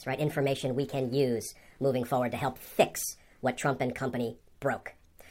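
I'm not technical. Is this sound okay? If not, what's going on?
No. This is a wrong sample rate fault: throughout the clip, the speech is played back faster than it was recorded, which fits audio made at 32 kHz being played at 44.1 kHz. Voices run about 1.38 times too fast and sound high-pitched, raised by about five and a half semitones.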